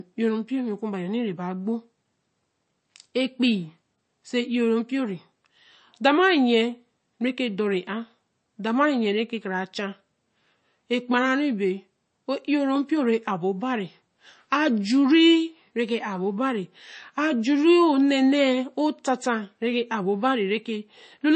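From start to finish the speech has MP3 compression damage, plainly audible throughout. Nothing is present above about 8.3 kHz, so the top of the spectrum is sheared off flat, which fits an encoder starved of bits at a low rate around 33 kbps. The likely cause is that the encoder zeroed weak frequency lines that then flicker in and out between frames, giving a watery, swirling texture, with metallic chirps on s sounds and softened, smeared consonant onsets.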